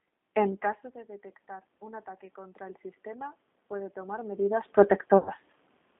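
It's a speech clip squeezed through the G.729 codec the whole way. The line is band-limited to roughly 200 Hz to 3.6 kHz, so there's nothing up top, and the voice has that plainly rough, slightly synthetic edge you get when speech is rebuilt from a vocal tract filter, pitch predictor and a handful of pulses at 8 kbit/s. Right after "caso de detectar", from 1.79 to 4.71 s, you can hear automatic gain rising: the level had dropped by about 19 dB, so the AGC slowly wound its gain up by about 8 dB, and the voice and room noise swell together over those few seconds. The talker also shifts position around 0.5 s and 4.5 s. Then from 5.18 to 5.30 s there's VoIP packet loss concealed by the speech codec. About 80 ms went missing, which fits eight 10 ms frames, and the decoder kept extrapolating from its last pitch and filter. That turns the sound into a buzzy or noisy, fading smear, and it stays weak briefly while the decoder recovers.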